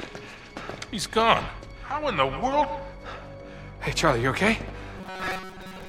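Robotic sound from repeated short buffers, 4.98 to 5.88 s: a rigid metallic buzz near 188 Hz, likely from roughly 5 ms snippets looping in place of most of the audio.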